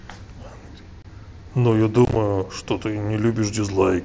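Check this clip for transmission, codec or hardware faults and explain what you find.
The clip has two bursts of unconcealed Bluetooth headset packet loss, heard through the light graininess of the mSBC wideband link. At 1.02 to 1.05 s, a 22.5 ms hole fits three lost headset frames. From 2.05 to 2.16 s, 60 ms of losses scattered over 105 ms give a rough, chopped crackle with abrupt-edged gaps.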